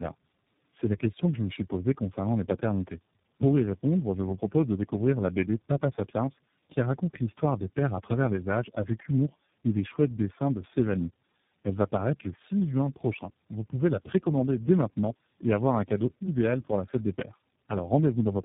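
Speech with tandem speech coding throughout: rough, muffled, warbly, nothing above 3.7 kHz, and more smeared than any single low-rate codec, which points to three speech coders in a row.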